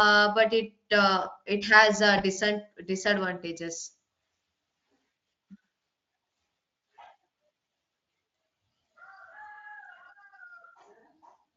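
In this speech clip, the sound briefly smears into a buzzy, fading tone at 2.17 to 2.21 s and again, slightly longer, at 6.77 to 6.81 s. This is VoIP packet loss concealed by the speech codec, which fits one and then two lost 20 ms frames being bridged from the last pitch and filter state, carried through the Speex codec.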